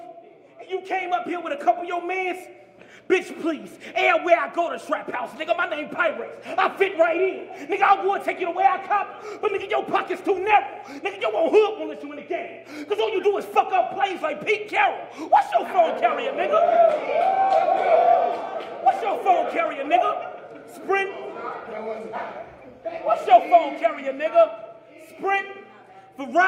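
There are no technical faults to describe at any point in this audio.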